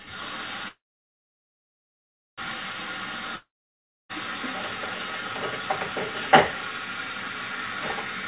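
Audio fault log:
0.68–2.40 s, call audio freeze: the last sound smears into a fading buzz, then about 1.6 s of silence. Playback resumes exactly where it stopped, likely from delayed packets, so nothing is lost and everything after runs about 1.7 s late.
3.36–4.11 s, long network dropout: a short fading buzz, then about 0.63 s of silence. The audio returns further on, likely after lost packets, with about 0.74 s of material missing rather than delayed.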